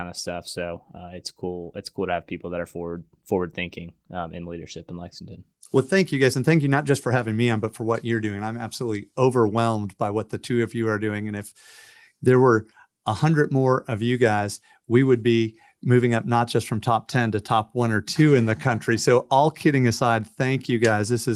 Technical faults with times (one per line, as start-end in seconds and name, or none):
none